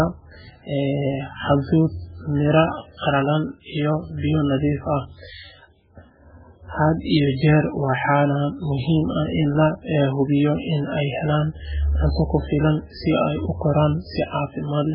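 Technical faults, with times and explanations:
Throughout, MP3 compression: watery, swirly smearing; spectrogram shows a hard ceiling at 5.3 kHz and flickering gaps, likely from a starved bitrate near 8 kbps.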